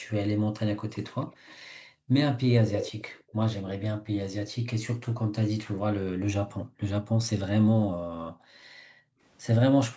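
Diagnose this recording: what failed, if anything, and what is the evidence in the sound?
Echo leak in the call processing: a copy trailing by 166 ms at 0.93–1.56, 2.69–3.23 and 6.59–6.65 s, likely residual loudspeaker pickup the canceller missed.

Background gated by the echo canceller: room sound ducks up to about 40 dB at 1.59–2.1, 3.23–3.37, 6.65–7.18 and 7.86–9.2 s while the canceller clamps the mic.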